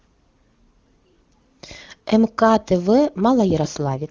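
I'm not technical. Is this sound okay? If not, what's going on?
No. From 3.80 s to 4.10 s there is an AMR rate drop: the phone network switched the HD Voice codec to a much lower setting, so the speech turns rough and robotic. Unlike a dropout, nothing goes silent, and it doesn't become muffled.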